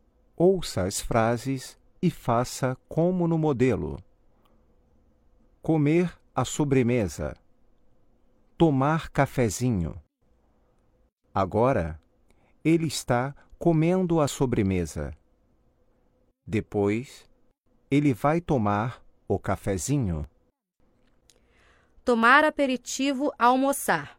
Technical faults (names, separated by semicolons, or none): overlap between stream segments